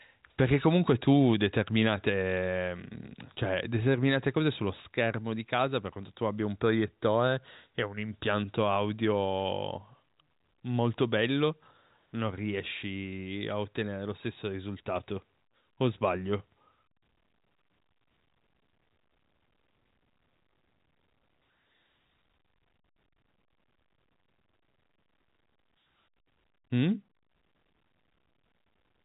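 Nothing is technically wrong with this speech clip, which comes through G.711 A-law telephone coding at 64 kbps.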